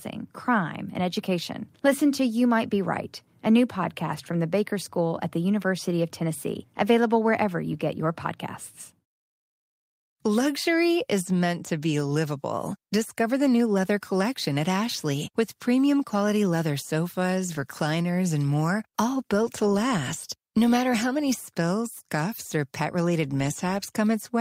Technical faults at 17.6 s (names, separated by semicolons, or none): lost packet rebuilt from error correction